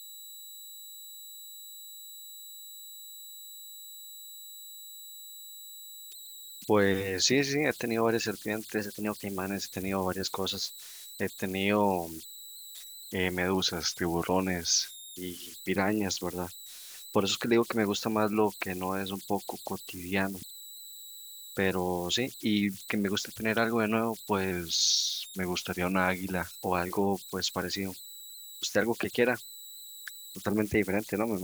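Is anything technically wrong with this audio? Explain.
Yes. Two faults are present in this speech recording.

Converter idle tones run through the whole clip. A whistle around 4 kHz sits in the pauses, with a grainy texture under quieter passages, at about 18 dB below the signal. This is how an undithered delta-sigma converter behaves at low input levels: it settles into repeating bit patterns, and those cycles produce a steady tone whose pitch is set by the small offset at its input.

There are three sudden speed-and-pitch shifts. From 8.79 to 9.46 s the speech runs 6.37% fast and 107 cents sharp. From 13.54 to 15.17 s and again from 24.51 to 26.45 s it runs 6.37% slow and 114 cents flat. Each shift is roughly a semitone. The likely cause is a drift correction step, where clock-matching software changes the playback rate all at once to refill or drain its buffer instead of adjusting gradually.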